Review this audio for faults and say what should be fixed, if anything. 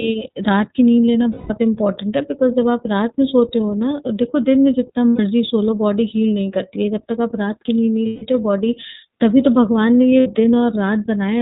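iLBC codec throughout: the whole recording is band-limited to narrowband, with nothing above 4 kHz, and the speech has a plainly rough, slightly synthetic texture. This comes from coding each frame's excitation independently at low rate, which fits iLBC's 13.33 kbps mode with 30 ms frames. To prevent this, carry the call over a wideband codec such as Opus instead of iLBC.

Lost iLBC frames at 1.32 to 1.51 s, 5.11 to 5.20 s, 8.07 to 8.22 s and 10.20 to 10.27 s: the speech is replaced by a held, buzzy or breathy vowel lasting 180, 90, 150 and 60 ms. This fits runs of six, three, five and two lost 30 ms frames, which the decoder filled by repeating the last pitch cycle mixed with noise. Because each frame decodes on its own, the speech recovers almost immediately afterward. To prevent this, reduce packet loss on the network path or add forward error correction or redundant packets so that lost frames can be rebuilt.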